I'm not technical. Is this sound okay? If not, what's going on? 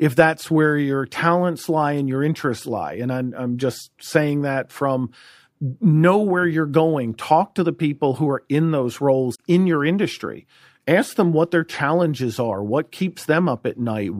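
No. There are compressed frames skipped at 9.34 to 9.39 seconds, just after "who are in those" and before "in your industry ask". Digital audio is stored in small blocks called frames. Here some were lost from the file or thrown out by the player as damaged, so playback jumps ahead by roughly 30 milliseconds. What you hear is a tiny piece of the speech missing, with a short blip or click where the two sides meet.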